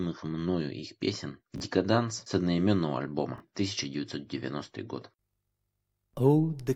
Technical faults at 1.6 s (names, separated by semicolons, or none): chunks out of order